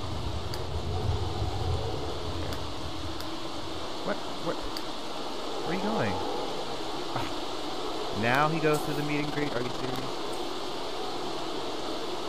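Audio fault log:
9.20–10.04 s, overlap-add ripple: the sound was split into windowed frames and rebuilt with overlaps that don't sum to a steady gain, so the level swings by about 6 dB once per frame, around 20 times a second, giving a rough flutter.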